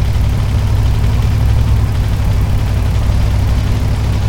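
At 0.37 s and again at 3.00 s there is a brief blip, about 10 ms and 14 ms long, from damaged data in the compressed stream. Corrupted bytes cause the decoder to misread those frames and lose sync until it finds the next valid frame header.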